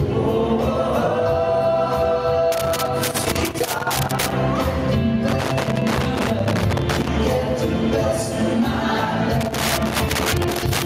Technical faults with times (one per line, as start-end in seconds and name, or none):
0.00-10.85 gain pumping
2.52-4.32 loose connector crackle
5.28-7.08 loose connector crackle
9.41-10.85 loose connector crackle